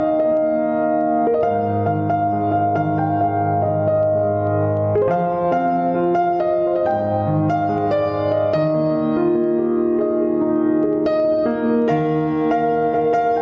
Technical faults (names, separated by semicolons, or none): gain pumping